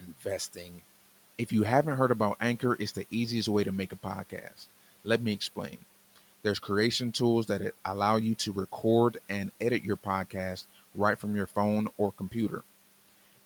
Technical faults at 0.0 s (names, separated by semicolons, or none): speech cut by the noise suppressor